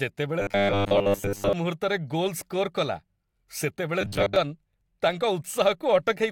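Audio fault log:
0.40–1.53 s and 4.01–4.36 s: robotic sound from repeated short buffers. The speech turns into a stiff, metallic buzz pitched at about 100 Hz, still loosely tracking the syllables. What's likely going on is that fresh audio isn't arriving fast enough, so the playback keeps looping a tiny slice, which fits a 10 ms chunk, while most of the real signal gets skipped. That steady loop rate is what stamps the fixed 100 Hz drone over the voice.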